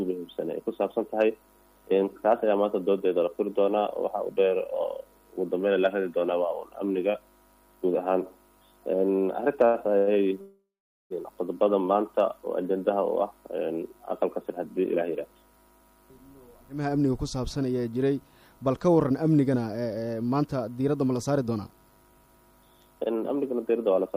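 Around 9.65 to 9.76 s and again 9.98 to 10.09 s there are two short stalls from a late packet: the jitter buffer ran dry, so the last bit of sound gets stretched about 86 and 90 ms with a slight buzz or dip, then picks up right where it left off.

Right after, from 10.41 to 11.12 s, comes a call audio freeze. The sound hangs on as a fading buzz or hiss, then goes silent for about 0.45 s, roughly 0.69 s added in all with nothing lost. Most likely packets got held up in transit and the buffer emptied.

Then there's jitter buffer speed-up at 14.25 to 16.72 s and 22.04 s to the end. The receiver snips tiny pitch-period slices to shed the built-up delay, around 150 ms in each stretch, so the audio runs 6 to 7% fast at the same pitch and feels a bit hurried.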